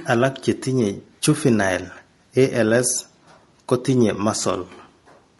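From start to finish the voice sounds rough and grainy, with a hiss filling the gaps between its harmonics and a dulled, synthetic top end. This is likely low-delay AAC compression (AAC-ELD), whose short frames blur pitch detail, pointing to roughly 32 kbps.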